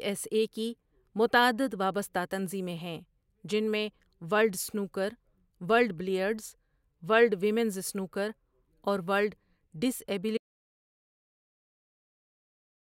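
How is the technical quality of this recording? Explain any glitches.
The recording has one clear glitch: an audio dropout to silence that begins at 10.37 s and runs to the end, about 2.5 s in all. Right after "ورلڈ ڈس" the speech stops mid-flow and the signal falls to silence, with no room tone or noise floor underneath. The input was likely lost through a disconnection, failed link or accidental mute while recording continued. Whatever followed is gone. The waveform shows a flat line, and the spectrogram goes completely blank.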